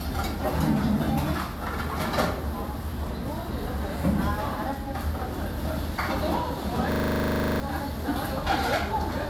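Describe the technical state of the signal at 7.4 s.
A system hang loop runs from 6.92 to 7.6 s, so 7.4 s falls inside it. The playback side froze while the sound hardware kept re-reading its ring buffer. The same 40 ms slice of sound repeats exactly, about 17 times, at a 25 Hz loop rate. It comes across as a rapid, rattling stutter with a buzzy edge rather than moving sound. Roughly 0.7 s of the real audio is missing behind it.

Transcoding between lossy codecs is also present at this moment, since it runs through the whole clip. The sound was encoded twice, and the artefact mix most likely comes from a Vorbis encode followed by HE-AAC, at bitrates in the region of 63 and 48 kbit/s. The second encoder spends bits reproducing the first one's smearing and adds its own, so both sets of artefacts are heard together. Nothing remains above 17.3 kHz.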